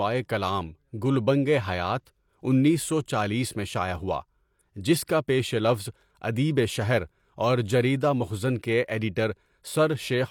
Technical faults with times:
2.05 pre-echo

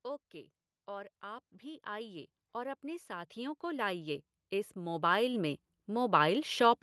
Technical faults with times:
0.86-6.51 automatic gain rising

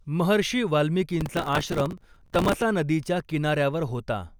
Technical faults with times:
1.21-2.62 processor overload crackle

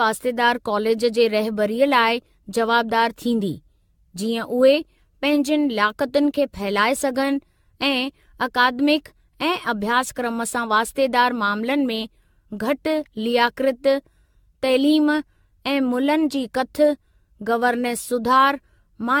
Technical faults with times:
0.00-19.20 generation loss

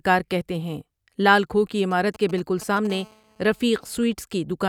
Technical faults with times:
1.91-2.87 GSM signalling bursts
2.90-4.00 GSM phone buzz

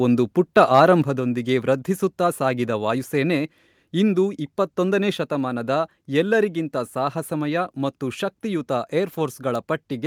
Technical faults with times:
0.57-0.80 microphone overload
1.02 microphone volume stepped down

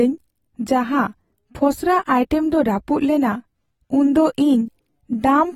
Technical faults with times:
0.00-5.55 AAC compression

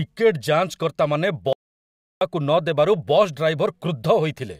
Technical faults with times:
1.53-2.21 audio dropout to silence

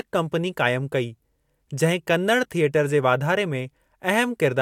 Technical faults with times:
none

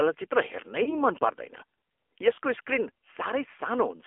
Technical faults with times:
0.00-4.07 AMR narrowband mobile codec
0.84-0.98 lost AMR speech frames
2.34-2.38 lost AMR speech frames

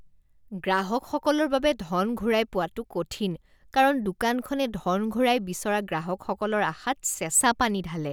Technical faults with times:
none

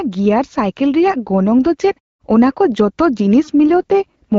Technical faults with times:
3.68-4.38 AMR rate drop

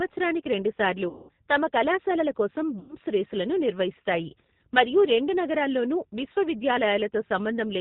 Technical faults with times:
0.00-7.81 G.729 codec
1.09-1.31 VoIP packet loss concealed by the speech codec
2.79-2.95 VoIP packet loss concealed by the speech codec

